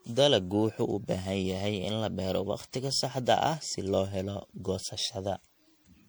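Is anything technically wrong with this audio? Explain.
Yes. Generation loss runs throughout the speech. It likely comes from repeated MP3 encoding, about seven passes at around 96 kbit/s. The result sounds swirly, hollow and smeared, with blurred attacks.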